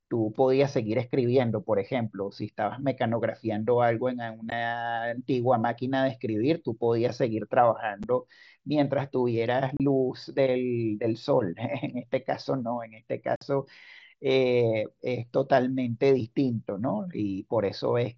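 Unconcealed Bluetooth headset packet loss cuts the speech at 4.50 s (15 ms), at 8.03 s (7.5 ms), from 9.77 to 9.80 s (30 ms) and from 13.36 to 13.42 s (52.5 ms). The lengths fit whole 7.5 ms headset packets dropped between headset and phone and left unfilled. Each gap is a hard-edged hole. The waveform shows breaks in the speech with vertical cliffs, and the spectrogram shows the speech cut off across the full band, which here reaches 8 kHz through the mSBC link.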